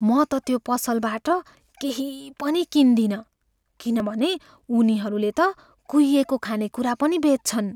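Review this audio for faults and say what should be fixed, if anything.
Audio missing between chunks at 4.00 s and 6.45 s. Each skip drops about 50 ms, with the edges joined with no silence in between. The likely cause is 2.5 s chunking that loses audio at each handover. To prevent it, buffer continuously so that each new chunk starts exactly where the previous one ended.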